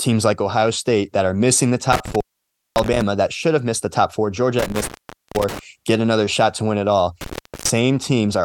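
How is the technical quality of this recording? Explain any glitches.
The speech is broken three times by an intermittent contact. The first dropout runs from 1.92 to 3.02 s, after "that are missing the" and before "that should have missed". The second runs from 4.59 to 5.59 s, ending just before "get another shot to". The third runs from 7.21 to 7.70 s, right after "to win it all". A loose plug or cable briefly opens the signal path. Each time the sound cuts out for about 0.55, 0.48 and 0.39 s. Crackle marks the edges of each gap, and faint hiss remains while the line is open.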